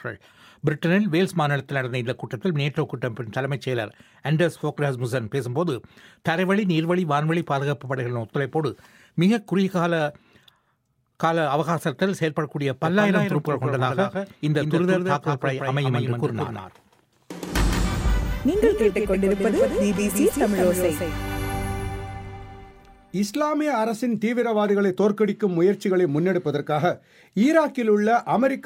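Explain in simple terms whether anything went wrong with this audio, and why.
Something went wrong between 12.85 and 22.71 seconds: a doubled audio track. Most likely the same sound was picked up a second time through a slower route, or two out-of-step copies were left in an edit. You hear the audio plus a somewhat quieter duplicate trailing it by roughly 150 milliseconds, so everything sounds smeared and stuttery, like a hard slapback echo with no room to it. The copy switches on and off abruptly at those two times.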